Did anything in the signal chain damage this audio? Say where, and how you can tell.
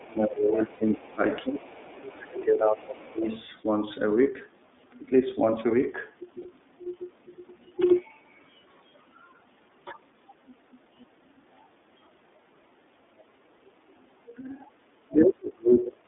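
Yes. Several stages left marks.

The codec stage affects the whole clip. The band runs from about 200 Hz to 3.6 kHz, and nothing above 4 kHz comes through. The speech sounds clear but rough and slightly synthetic. That is the iLBC codec at work. It codes each frame's excitation on its own, with a coarse model of the waveform. The texture points to its 13.33 kbps mode with 30 ms frames.

Call processing comes next. The speech sinks and thins from 0.0 to 1.2 s and from 1.43 to 3.26 s. The deepest dips are strong, about 25 dB. It drops briefly again at 14.38 to 14.44 s and at 14.66 to 14.77 s. Then it falls hard, down to about 40 dB, from 15.08 s to the end. This is speech suppressed in double talk. The likely cause is an echo canceller that could not tell this talker from loudspeaker echo. It turned both down.

The same stage lets another voice through. Faint scraps of a second voice appear from 0.18 to 0.34 s and from 1.56 to 1.79 s, far below the main speech. 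A stronger scrap follows from 3.22 to 3.44 s, about 10 dB louder. This is the other side's voice leaking through. The likely source is the far end playing on a loudspeaker, with the echo canceller not removing all of it from the microphone pickup.

The network dropped packets. At 0.74 s a 60 ms gap turns into a held, buzzy vowel, which fits two 30 ms frames lost. Shorter 30 ms patches follow at 4.23 s and 6.42 s. These are lost iLBC frames. The decoder repeated the last pitch cycle mixed with noise to fill each hole. Because each iLBC frame stands alone, the voice is right again almost at once after each gap.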